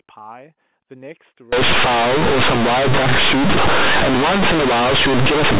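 From 1.53 s to the end, mu-law coded bytes are read as linear 8-bit samples without expansion: companded audio read as linear. This speech then turns into very loud, buzzy distortion with heavy noise in pauses, over the 4 kHz G.711 telephone band heard before it.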